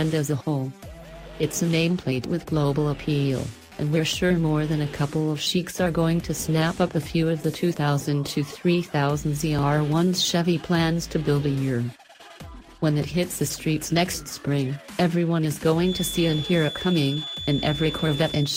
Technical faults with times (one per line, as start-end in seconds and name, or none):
1.59 overlap between stream segments
9.59 overlap between stream segments
15.78-18.56 feedback whistle